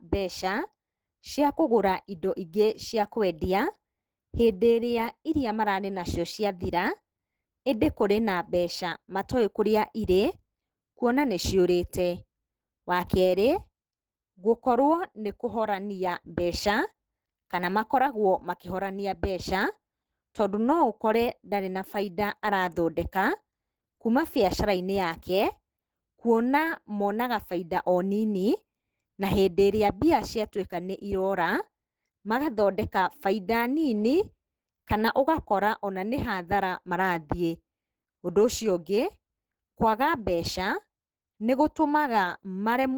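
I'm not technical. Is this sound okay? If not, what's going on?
No. This speech was likely squeezed hard into a small file at some point and later saved again as a large, high-quality file. That's low-bitrate audio saved at a high bitrate. The bigger file can't bring back what was lost, so the whole recording keeps the flaws from that earlier squeeze.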